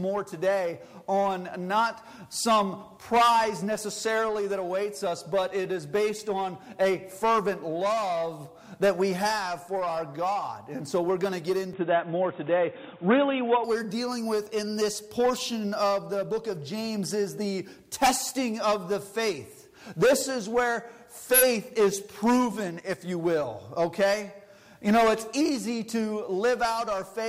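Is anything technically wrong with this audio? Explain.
Yes. From 11.73 to 13.64 s the recording likely switched its input to a poorer device. That device's narrower pickup removes everything above 3.8 kHz, so the sound turns dull and boxy, shifts in level by roughly 5 dB, and gains a faint new noise floor, with no gap at the switch.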